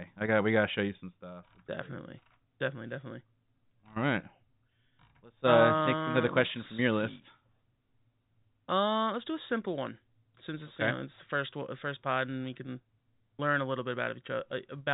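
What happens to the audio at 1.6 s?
At 1.6 s the speech passes through intact, carried by ordinary G.711 telephone coding with its usual 4 kHz band limit and no fault at that point.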